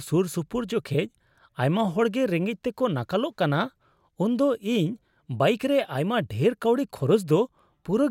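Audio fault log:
No faults heard.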